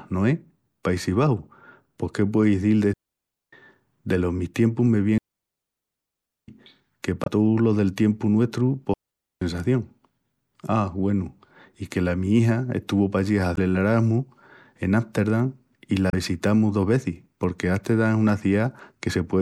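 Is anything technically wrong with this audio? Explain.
Yes. The speech has two kinds of fault.

A digital wireless dropout occurs three times: at 2.93 to 3.53 s (about 0.59 s), 5.18 to 6.48 s (1.3 s) and 8.94 to 9.42 s (about 0.48 s). The wireless link lost too much data, so the receiver muted with a very short fade. Each one is a clean hole of near silence with no noise burst on either side. On a waveform the trace drops almost to flat, and a spectrogram shows an empty vertical band with sharp edges.

Damaged data in a compressed stream appears at 7.23 to 7.28 s, 13.53 to 13.59 s and 16.10 to 16.15 s, each about 50 ms long. Corrupted bytes made the decoder misread frames and lose sync, and it had to hunt for the next frame header. Each one is a brief chirp, squawk, click or short hole.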